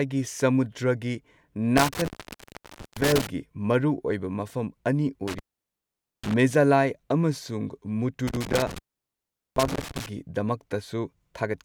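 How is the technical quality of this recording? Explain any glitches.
The speech is interrupted three times by an intermittent contact, around 1.78–3.27 s, 5.28–6.34 s and 8.27–10.06 s. A loose plug or cable connection briefly opens, cutting the signal for roughly 0.89 s, 0.84 s and 0.78 s, with crackle at each break and faint hiss during the gap.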